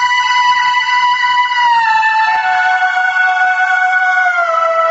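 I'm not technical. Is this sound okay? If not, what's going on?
No. Throughout, the level is squashed, bringing loud and soft closer together. This is gain pumping, likely from the input set too hot so that a fast limiter keeps pulling it down.

There are two moments of short concealed packet loss, at 2.35 to 2.39 s and 3.45 to 3.48 s. Each time, a sliver of audio went missing on the call. The receiver patched the gap by extending the preceding sound, which comes across as a quick smear. The call path itself, which leaves nothing above 8 kHz, is working as intended.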